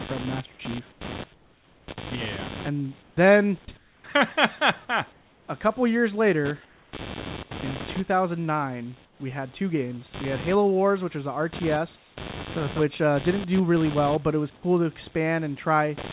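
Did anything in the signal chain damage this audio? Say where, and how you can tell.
Yes. In the analogue wiring, computer activity noise runs throughout: a buzz pulsing at roughly 100 Hz, about 15 dB below the signal. It tracks computer load on the shared ground, not the sound.

In call processing, comfort noise replaces the background at 0.92, 1.34–1.88, 3.02, 3.77, 5.12–5.48 (before "couple years later"), 6.65, 9.05 (before "we had two games") and 11.96 s. In each gap a steady, featureless hiss, about 2 to 7 dB quieter, stands in for the real room. This is likely discontinuous transmission muting pauses that the receiver then fills with synthetic noise.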